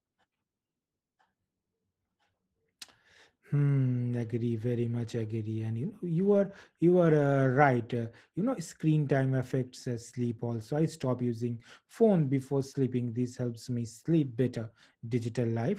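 Opus voice compression runs through the whole speech clip, with SILK underneath and a CELT top layer. Coarse excitation coding leaves it hoarse and faintly robotic, consistent with around 16 kbps.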